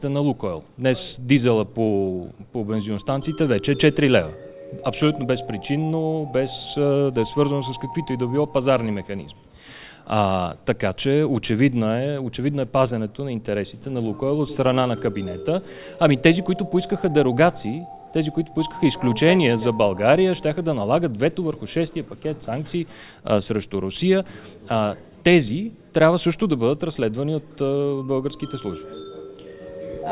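No technical faults can be heard anywhere in this audio. There is no event whose time or value needs noting.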